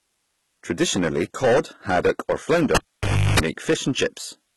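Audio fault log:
Throughout: hard clipping, speech driven about 21 dB past full scale, so a modest share of samples have flattened peaks, giving harsh fuzz on every loud syllable.
Throughout: codec artefacts, likely from HE-AAC compression at very low bitrate; treble is rebuilt from copied lower bands, so sibilants sound gritty and metallic, and nothing remains above 11.8 kHz.
2.75 to 3.40 s: cable pulled and plugged in just after "cod haddock or"; a pop, about 0.6 s of near silence with roughly 0.34 s of 50 Hz mains buzz as the tip touches, then a second pop on reconnection.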